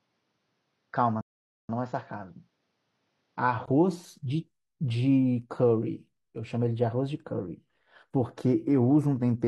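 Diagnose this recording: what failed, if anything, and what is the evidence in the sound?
From 0.0 to 3.68 s the speech has nothing above 6.9 kHz, sits about 5 dB lower and carries a faint noise floor of its own. At 3.68 s a 20 ms gap gives way to fuller sound. This points to an input switched to a poorer device at the capture or driver stage, likely a narrower-band microphone. A codec band limit would not change level and noise at one switch point.

A rebuffering stall at the playback stage runs from 1.21 to 1.69 s. The speech halts into silence for about 480 ms, then resumes exactly where it stopped. The player ran dry waiting for data. Unlike a network dropout, no audio is skipped; only time is added.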